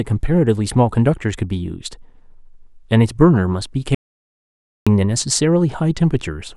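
At 3.95 s an audio dropout to silence cuts the speech for 0.92 s, likely from lost input, leaving a flat, silent waveform and blank spectrogram until 4.87 s.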